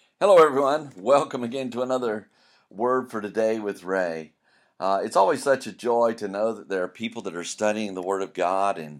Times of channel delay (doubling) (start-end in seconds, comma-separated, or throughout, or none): none